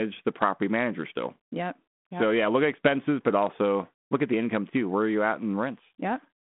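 No technical faults are present.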